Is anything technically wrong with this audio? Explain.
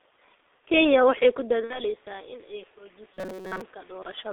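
Yes, a few things are off.

Throughout, the sound has been through a G.723.1 codec at about 6.3 kbit/s. The line only passes roughly 300 Hz to 3.6 kHz, and the heavy coding leaves things muffled, hoarse and smeared at the consonants.

From 1.01 s to 4.28 s there's automatic gain rising. The input level dropped by about 16 dB, partly as the talker moved back around 1.5 s, and the AGC slowly pushed gain up by about 8 dB. Voice and background swell together.

At 1.64 to 1.81 s there's VoIP packet loss concealed by the speech codec. About 60 ms went missing, which fits two 30 ms frames. The decoder stretched its last frame into a fading tail, and the sound stays weak or distorted for a bit after.

From 3.14 to 3.61 s there's a robotic sound from repeated short buffers, likely from audio arriving too seldom. Most of that stretch turns into a rigid metallic buzz at 188 Hz, which fits a chunk of about 5.3 ms repeated over and over.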